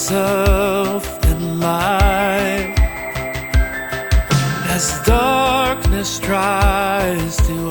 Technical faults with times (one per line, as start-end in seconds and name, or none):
0.00-7.70 USB whine